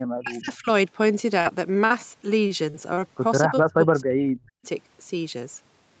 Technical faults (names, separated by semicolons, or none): speech suppressed in double talk; repeated packet loss (robotic sound); echo leak